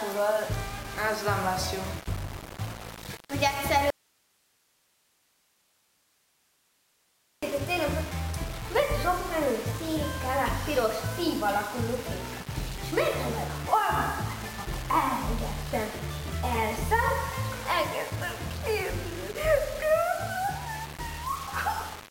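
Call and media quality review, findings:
Low bit depth without dither, throughout: grainy distortion that tracks the signal, around 15 dB down. Likely rounding to 5 bits with no dither.

Audio dropout to a faint residue, 3.90–7.43 s: abrupt 3.52 s cut leaving hiss about 40 dB down. Hard edges and live hiss separate it from a pause or fade. Likely signal lost upstream while the path stayed open.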